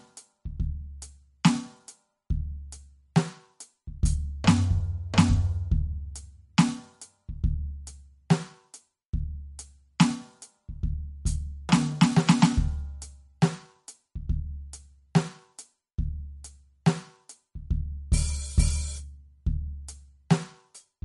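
Throughout, the music sounds watery and dull, with nothing above 11.2 kHz. This is likely MP3 compression at a low bitrate, fitting about 43 kbps.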